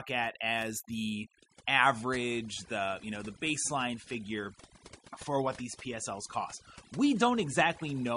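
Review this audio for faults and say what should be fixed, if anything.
Overdone noise removal runs throughout: bands near the noise estimate are pulled down hard, leaving twinkling specks in near-silence. Use gentler reduction strength.

From 1.14 s to the end, the stream drops to a lower bitrate with no gap. Treble vanishes above 10.6 kHz and artefacts rise, which points to a low-rate MP3 version. Give the player more buffer headroom or set a higher minimum bitrate.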